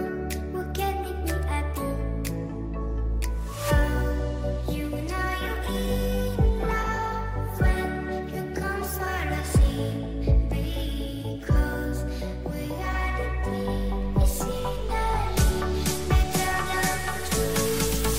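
At 14.03 s the waveform's zero line jumps by about -36 dBFS and stays there to the end, a DC step heard as a low thump or click.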